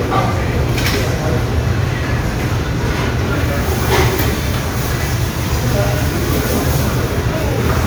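No technical faults are audible.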